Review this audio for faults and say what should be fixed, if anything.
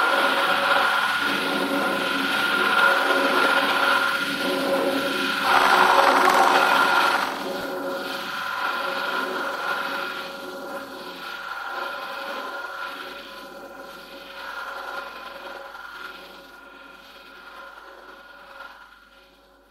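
Two brief jumbled moments occur at 7.61 to 7.64 s and 13.23 to 13.25 s. Both are chunks out of order. The audio moves in 10 ms blocks, and one block arrived or was written late, landing two blocks behind its place at 7.61 s and one block behind at 13.23 s. Nothing is missing, but the misplaced block creates three hard joins each time. Reorder incoming blocks by sequence number in a small jitter buffer before playback or writing.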